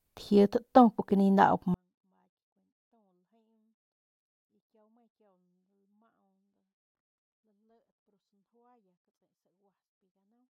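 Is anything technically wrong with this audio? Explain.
Yes. A 24-bit alignment error (too quiet) begins at 1.74 s and runs to the end. The speech samples sit in the low 24 bits of each 32-bit word but are read as full 32-bit values, so the level drops by about 48 dB at once and the clean speech becomes almost inaudible.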